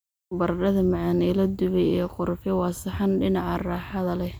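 Nothing in the way of a technical fault turns up anywhere in this bit of speech, so there's honestly nothing here to point out.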